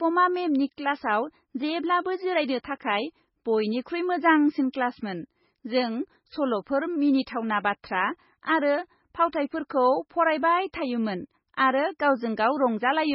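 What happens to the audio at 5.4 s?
Low-bitrate audio saved at a high bitrate runs through 5.4 s and the whole clip: the speech stops at 5.6 kHz, with a smeared, watery coding texture. This likely comes from a very low-bitrate MP3 re-encoded at a high bitrate, which cannot restore what was lost.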